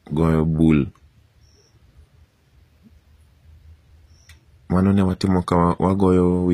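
Throughout, the top end stops dead at 15.4 kHz and the sibilants sound gritty and metallic: likely HE-AAC compression at a bitrate around 24 kbps, faking the treble from copied lower bands.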